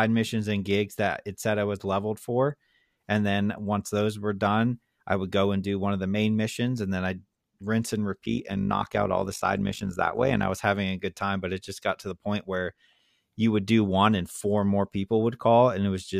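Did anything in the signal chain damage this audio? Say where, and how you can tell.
Yes. Overlap-add ripple damages the speech from 8.24 to 10.51 s, starting after "then I'd rinse and" and clearing by "was having a good". The level pulses about 11 dB at roughly 50 Hz, a rough, robotic tremolo. This points to a frame-based processing stage, such as call processing or a codec's resynthesis. Windowed frames were rejoined with an overlap that doesn't sum to constant gain. So the level dips and swells once per frame.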